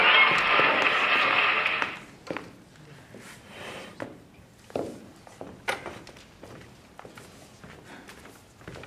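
No technical faults can be heard anywhere in this recording.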